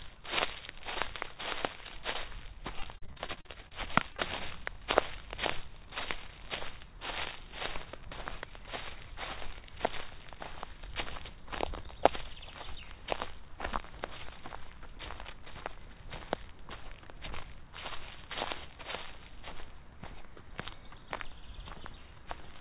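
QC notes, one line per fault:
2.80–3.73 s, repeated packet loss (robotic sound): sixteen gaps, the longest 42 ms, took out about 340 ms of audio, so roughly 35% of this stretch is patched. Each hole is filled by extending the last sound, and the fills come so close together that the sound turns choppy and synthetic, with pieces missing.
4.13–4.20 s, short concealed packet loss, two back to back: each drop removed about 20 ms before the receiver bridged it by carrying the preceding sound forward and blending back in, giving a brief smear or wobble in audio that is already limited to 4 kHz by the G.711 call path.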